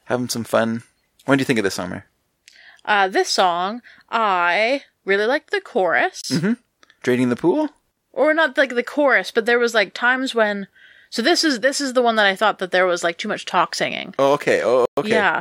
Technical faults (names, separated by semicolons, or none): Bluetooth stall